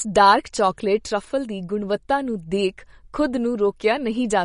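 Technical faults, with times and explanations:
Throughout: MP3 compression. Nothing reaches above 10.6 kHz, and the speech has a plainly watery, swirling texture, with metallic chirps on s sounds and smeared consonant onsets. The likely cause is an MP3 encoder short of bits, consistent with a bitrate near 40 kbps. It cuts the treble at a fixed point and drops weak frequency lines that flicker on and off between frames. A spectrogram shows a hard ceiling at 10.6 kHz with speckled gaps below it.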